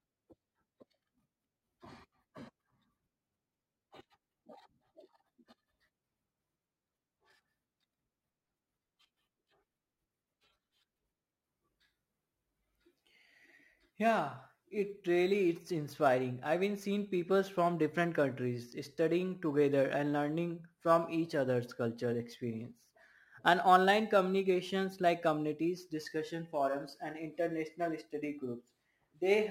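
It's a speech recording with crude rate conversion running the whole way through. Samples seem to have been repeated rather than filtered, which fits a 44.1 kHz to 48 kHz conversion, leaving a gritty, inharmonic fizz roughly 30 dB below the speech that rides along with louder, brighter syllables.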